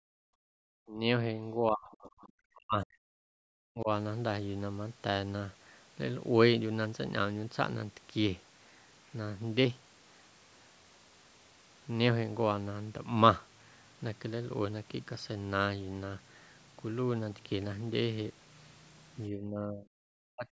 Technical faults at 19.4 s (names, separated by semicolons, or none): speech suppressed in double talk